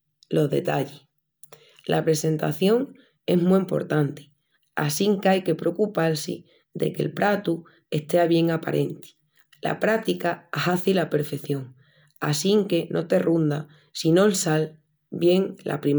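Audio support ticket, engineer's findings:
Nothing stood out on listening to the speech recording.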